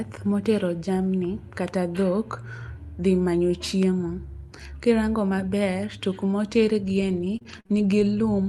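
Repeated packet loss (robotic sound) affects this speech recording from 6.85 to 8.19 s. Four short gaps, the longest 43 ms, each get patched by stretching the preceding sound, so the stretch turns choppy, with roughly 100 ms missing, over an Opus call path at 40 kbps with a 12 kHz bandwidth.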